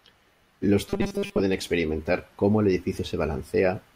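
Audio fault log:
0.89–1.40 s, robotic sound from repeated short buffers: new audio likely stopped arriving in time, so playback kept looping the last short buffer while most of the real signal in this stretch was skipped. The 200 Hz buzz points to a block of about 5 ms repeating over and over, which stamps a fixed, metallic pitch on the speech that only loosely tracks its shape, clearing just before "experimentar cómo el".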